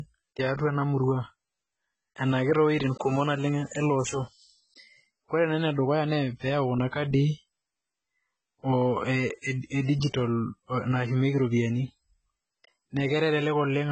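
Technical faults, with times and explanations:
Throughout: AAC compression. Nothing reaches above 8.3 kHz, and the speech sounds dull and smeared with a warbling, fizzy texture on sibilants. This heavy damage likely comes from AAC-LC at a very low bitrate, around 16 kbps. Unlike a simple low-pass filter, it leaves gaps and swirling noise within the remaining band.
3.75 s: electrical switching spike. A sharp snap lands on top of the speech, which carries on unbroken beneath it. This points to a nearby switch or static discharge arcing into the audio line. Unlike a dropout or digital glitch, nothing is removed or repeated.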